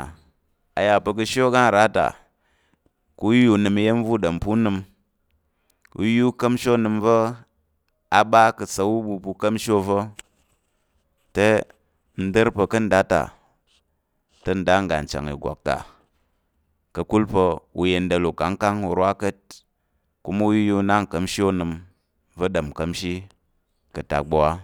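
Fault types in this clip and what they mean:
Nothing to flag here: no technical faults turn up anywhere in this speech recording.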